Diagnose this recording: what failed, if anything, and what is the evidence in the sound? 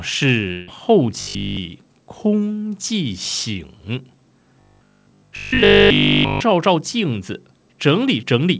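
Network stage, a long network dropout. From 0.52 to 0.70 s the sound gives way to a fading buzz lasting about 157 ms. It never reaches silence. About 160 ms of audio is missing. The likely cause is packets that never arrived, with the receiver stretching the last sound.

Buffer or jitter-buffer stage, robotic sound from repeated short buffers. From 1.21 to 1.57 s and 4.60 to 6.40 s the speech becomes a rigid metallic buzz at 50 Hz. Essentially all of it is repetition. That pitch fits a 20 ms chunk likely replayed while fresh audio was skipped.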